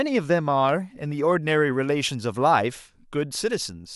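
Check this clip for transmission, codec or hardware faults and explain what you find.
One fault is present: pre-emphasis left on, from 0.69 s to the end. The treble shelf of the 50/15 µs CD curve was applied without its matching de-emphasis. Highs sit about 8 dB up at 10 kHz, so the speech turns thin, bright and hissy.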